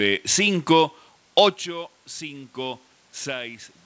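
Automatic gain rising in this speech: from 1.64 s to the end, the gain control slowly compensates for an input about 16 dB quieter, swelling voice and room noise together.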